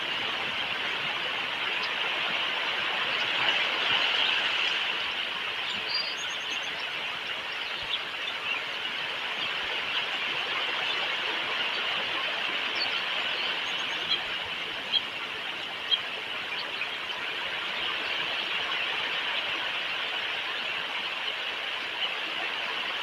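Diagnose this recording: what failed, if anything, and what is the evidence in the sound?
Nothing failed, and the sound gives no evidence of any fault anywhere in the recording.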